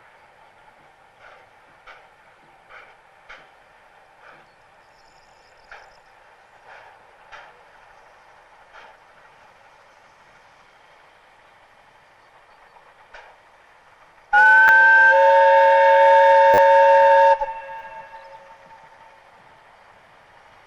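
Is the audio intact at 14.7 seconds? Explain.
No. Two things are going on there. Hard clipping runs from about 14.36 s to 17.33 s. For those three seconds the signal goes just past what the chain can carry, only about 1 dB over, so the tallest peaks get sliced flat. That's mild overload, so you'd hear a light crackle riding on the loudest moments rather than constant fuzz. The flattened tops add harmonics way up high, which is where that edge comes from.

Right inside that stretch, at 14.68 s, there's a repeated buffer. The playback side didn't get fresh audio in time, so it played its last chunk once more. The repeat points to a buffer of about 10 ms, and roughly that much real audio is lost. With a buffer that short it doesn't come across as a stutter. It's more a click or brief buzz, with a hard join at each edge of the doubled piece.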